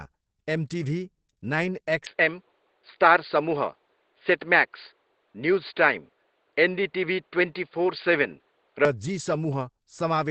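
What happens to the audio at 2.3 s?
At 2.3 s the sound is inside a stretch from 2.06 to 8.85 s where the input likely switched to a poorer device. Everything above 4.8 kHz disappears, the level shifts by around 5 dB, and faint new background noise appears, with no gap at the switch. The speech turns duller and boxier. On a spectrogram the energy ends at a flat ceiling near 4.8 kHz for that span, and the waveform steps in height at 2.06 s.

Across the whole clip the audio also shows Opus compression, heavy enough that the encoder was likely running in its SILK speech mode at a rate that fits about 12 kbps. Nothing passes above 8.6 kHz, and the speech sounds muffled and hoarse. A spectrogram shows a hard cutoff at 8.6 kHz and coarse, smeared detail below it.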